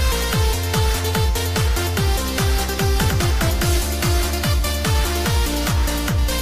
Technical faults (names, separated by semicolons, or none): none